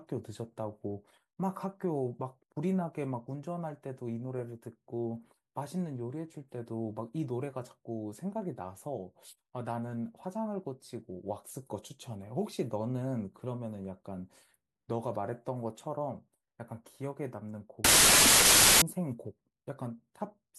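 Speech recording that breaks into loud noise from 17.85 to 18.82 s. It's a wrong sample width fault: packed 24-bit samples read as 32-bit, so the buried speech runs 1.33 times fast and high.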